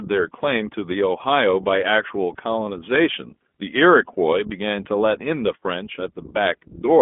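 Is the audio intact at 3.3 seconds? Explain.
No. At 3.3 seconds, as throughout the speech, the iLBC codec is coding each 20 ms frame independently and passing only about 200 Hz to 3.5 kHz, likely in its 15.2 kbps mode. The result is plainly audible: muffled, narrowband speech with a rough, synthetic edge.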